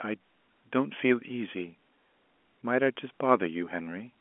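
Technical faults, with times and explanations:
No technical faults are heard in this speech, so there are no times or explanations to give.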